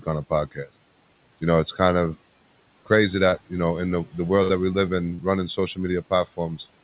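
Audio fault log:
3.29–3.35 s and 5.15–5.23 s: short concealed packet loss. About 30 ms went missing each time, and the decoder extended the preceding sound, heard as a brief smear. On a spectrogram it shows as a copied, evenly smoothed continuation with no fresh onsets. The second event also shortens the sound by about 13 ms.
4.43–4.52 s: burst of packet loss. Roughly 60 ms never arrived in time, so the receiver held the last sound and faded it into a decaying buzz or hiss. The waveform shows the level shrinking, and the spectrogram a flat, frozen band below the call path's 4 kHz ceiling. The speech then resumes slightly further on.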